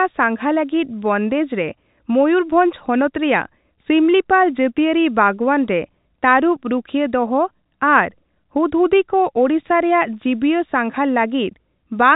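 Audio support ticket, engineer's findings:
No faults found; telephone-band speech, nothing audibly wrong.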